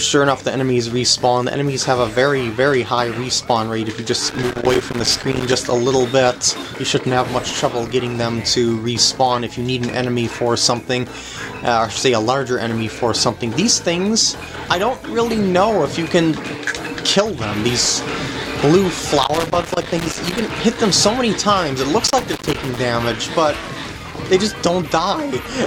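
Loose connector crackle at 4.29–5.54 s, 19.02–20.50 s and 22.07–22.78 s: an intermittent contact chops the signal into irregular scratchy bursts, appearing as ragged waveform dropouts and broadband vertical spectrogram streaks.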